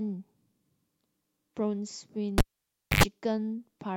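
A speech clip hit by a cable pulled and plugged in from 2.38 to 3.03 s. A pop marks the break, then about 0.6 s of near-flat waveform. A roughly 96 ms burst of 50 Hz mains buzz shows as harmonic stripes on a spectrogram before a second pop restores signal.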